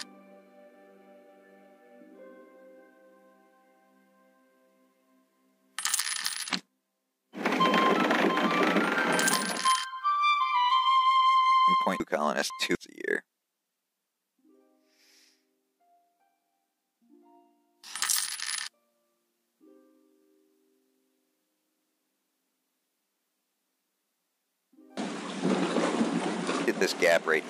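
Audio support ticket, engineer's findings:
Chunks out of order, 6.0–6.5 s and 12.0–12.75 s. Probable cause: the jitter buffer or write path committing a block late, after the blocks meant to follow it. The jumps fit 250 ms blocks, displaced by one block at 6.0 s and two at 12.0 s. No audio lost, only reordered. Heard as a brief jumbled, garbled passage with three hard joins in each region, the later one longer.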